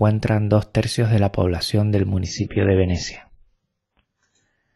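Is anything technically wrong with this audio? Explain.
Yes. From 2.24 s to the end, the adaptive stream switches to a lower bitrate: treble vanishes above 7.6 kHz and artefacts thicken, consistent with a drop to about 16 kbit/s after a slowed connection. Unlike a buffering stall, the change is abrupt with no gap.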